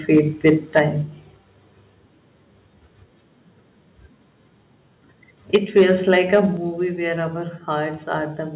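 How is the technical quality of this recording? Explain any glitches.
The recording has two recurring problems: harsh, crackling peaks near the start and again after five seconds, and three sudden drops in level that follow some of them.

Microphone overload occurs at 0.14–0.2 s, 0.46–0.5 s, 0.76–0.82 s, 5.54–5.83 s and 6.1–6.4 s. The loudest moments take on a gritty, buzzing edge. The likely cause is an input level set too hot: peaks pushed about 2 to 6 dB past the converter's ceiling, and their tops were flattened. At worst, roughly a tenth of the samples are clipped, which produces the added distortion.

The microphone volume stepped down at 0.79 s, 5.56 s and 6.57 s, the last just before "where our". Each time, the sound and its background abruptly become quieter, by about 4 dB, 4 dB and 6 dB. This is most likely the call software's automatic gain control reacting to the clipped peaks and cutting the input volume in one step. 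Two of the drops land inside distorted passages, so the level falls mid-peak.

All of this passed through a G.711 call path, so nothing above 4 kHz is present.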